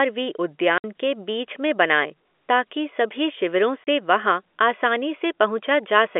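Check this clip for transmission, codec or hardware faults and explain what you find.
There's packet loss filled with silence, with hard-edged gaps at 0.78 s (60 ms) and 3.84 s (30 ms). That fits 30 ms packets dropping, with the receiver inserting nothing, so the speech cuts out abruptly, over the narrow G.711 telephone band.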